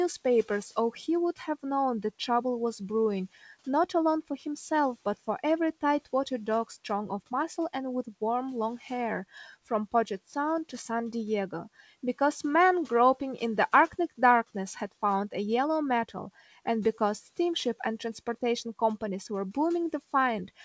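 At 1.36 to 1.64 s and again at 9.92 to 10.3 s, speech cut by the noise suppressor turns parts of the sound down by up to about 12 dB, roughly a tenth of a second each time, so they sound swallowed. Unlike a packet-loss dropout, nothing goes fully silent; the room noise, about 27 dB below the speech, dips along with it.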